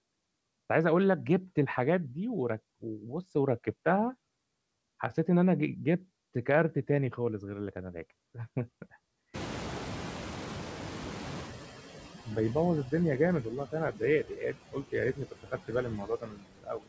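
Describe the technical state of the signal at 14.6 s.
At 14.6 s the noise suppressor mistakes part of the speech for noise between 14.24 and 14.94 s, turning it down by up to about 15 dB, so roughly a third of a second of speech sounds swallowed and faint. This is speech cut by the noise suppressor. The same suppressor is pulling the background down by about 14 dB frame by frame. These noise suppressor artifacts are working against room noise that has grown much louder since about 9.5 s.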